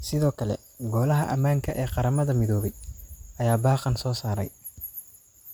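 Right from the start and running the whole way through, this speech has a swirly, hollow, smeared quality, with consonant attacks blurred. That's generation loss, likely from about three rounds of MP3 encoding at around 128 kbit/s. Each pass requantises on a shifted frame grid, so the noise and spectral holes stack up. The top end stops near 20.1 kHz.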